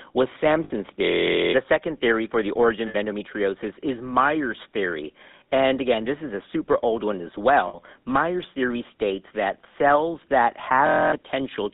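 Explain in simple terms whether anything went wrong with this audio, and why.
Three things went wrong.

The whole clip has passed through the GSM full-rate codec, the original mobile-phone voice compressor. It doesn't store the actual sound. It stores a rough model of the mouth and throat and drives it with a simplified pulse pattern. Only the range from about 200 Hz to 3.7 kHz gets through, so the speech sounds thin and boxed-in, with a plainly audible buzzy, gravelly roughness over every sentence.

There are three spots of lost GSM frames, each about 60 milliseconds long: at 0.64 s, at 2.88 s between "theory for the origin" and "endometriosis is", and at 7.68 s just after "super old one as". Data went missing in transmission, so the phone reused the last good piece of sound. You hear a brief, rough metallic ring in place of the missing bit.

Near the end, from 10.87 to 11.12 s, right after "states that cells that", there is a system hang loop. 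The computer stalled while the sound hardware kept replaying the same 23-millisecond snippet, which fits a 1024-sample buffer. It repeats 11 times at about 43 times a second, so it comes out as a steady buzz. The real sound behind it, roughly a third of a second, is lost.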